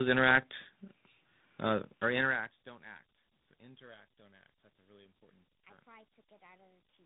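Tandem speech coding runs throughout: three successive speech coders each re-encode the previous one's output, leaving rough, warbly speech band-limited below about 3.8 kHz, with level fades intact.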